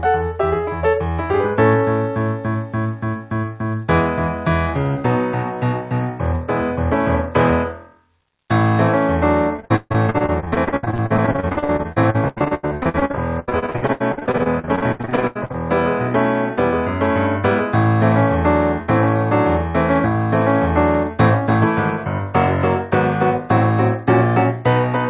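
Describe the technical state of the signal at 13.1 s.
At 13.1 s the signal is inside a stretch of repeated packet loss (robotic sound), 9.56 to 15.56 s. Dozens of short gaps, up to 142 ms, are patched by extending prior audio, giving choppy sound with pieces missing.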